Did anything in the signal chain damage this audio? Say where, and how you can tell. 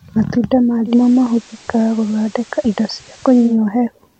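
Yes. Digital radio blending to analogue at the receiver: from 0.85 s to 3.58 s the speech cross-fades over 184 ms to the FM broadcast, gaining hiss roughly 30 dB down, with level unchanged, before blending back.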